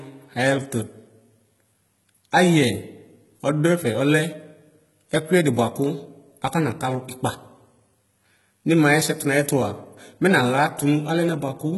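Throughout the speech, the treble appears to have been rebuilt rather than coded, most likely by HE-AAC compression at a very low rate, around 16 kbps. Copied upper bands leave s sounds gritty and metallic, and nothing is present above about 11.8 kHz.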